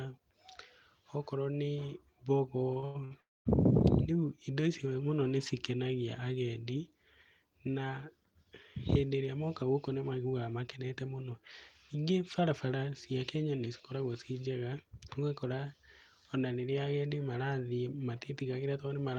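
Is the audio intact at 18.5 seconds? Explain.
No. At 18.5 seconds the speech is inside a jitter buffer speed-up running from about 17.95 to 18.95 s. The receiver had built up more buffered audio than it aims for, so it trimmed short slices of one or a few pitch periods in quick succession, roughly 150 ms in total, and played the speech at about 111% speed. It sounds hurried but keeps its normal pitch, which separates it from a playback-rate error, where speeding up would also raise the pitch.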